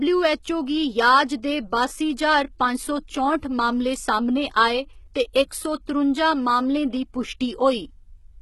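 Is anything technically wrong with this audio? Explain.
Yes, through the whole clip the speech has a gritty, metallic treble and nothing above 11.8 kHz, likely HE-AAC compression at a low bitrate around 16 kbps, rebuilding highs from copied lower bands.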